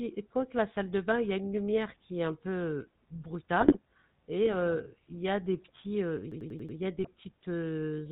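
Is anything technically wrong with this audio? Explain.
Yes. The whole clip carries GSM full-rate codec damage at 13 kbps: pulse-driven vocal-tract modelling gives a buzzy, gravelly roughness, and the spectrogram shows nothing above 4 kHz.

GSM bit errors occur at 3.60–3.77 s, just before "et heu il y", and at 6.99–7.08 s, just after "heu il y a". Corrupted filter, pitch or gain values cause squawks and pops, seen as smeared spectral blotches and sudden level spikes.

A system hang loop runs from 6.32 to 6.78 s, between "des petits heu il" and "y a". A 92.88 ms segment, which fits a 4096-sample buffer, repeats five times at 10.8 Hz, producing a stutter. The waveform shows identical repeating blocks.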